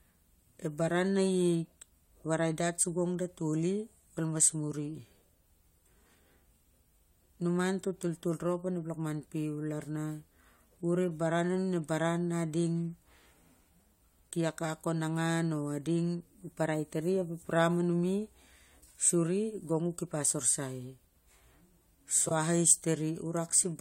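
A brief garbled flutter at 22.26 to 22.32 s near the end of this speech recording marks frames out of order: two adjacent blocks of about 21 ms each were decoded swapped.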